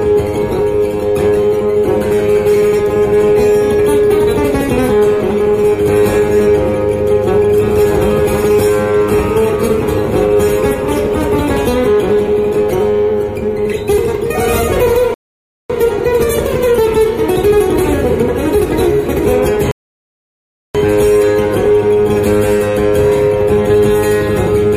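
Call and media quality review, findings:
Rebuffering stall, 15.14–15.70 s: sound cuts to clean silence, then resumes at the exact point it stopped; 0.56 s added. Player starved of downloaded data, waited for refill.
Rebuffering stall, 19.71–20.75 s: same pattern, 1.03 s added. Unlike packet-loss dropouts or concealment gaps, no audio is skipped or smeared; timeline simply extends, pointing to buffer underrun in delivery, not codec or network-loss repair.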